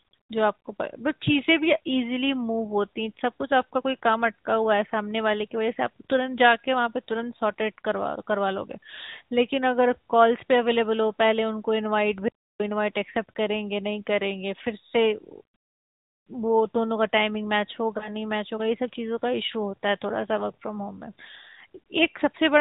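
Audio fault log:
throughout: AMR narrowband mobile codec. The speech has been squeezed through the AMR-NB mobile codec, with plainly audible damage: a buzzy, synthetic timbre, which fits the 10.2 kbps mode. The codec rebuilds the voice from a vocal-tract model excited by a few pulses per 5 ms subframe, at 8 kHz sampling. On a spectrogram, all energy stops at a hard ceiling near 4 kHz, and the harmonics look smeared and grainy.
17.98–18.10 s and 21.84–21.86 s: lost AMR speech frames. At each point one 20 ms frame failed to arrive intact, so the decoder filled the gap by repeating the previous pitch and vocal-tract settings at falling gain. Each loss is heard as a brief dip or warble, and the voice sounds weak or rough for a moment as it recovers. In the waveform, the envelope sags briefly. On a spectrogram, the harmonic pattern freezes and fades over each marked span.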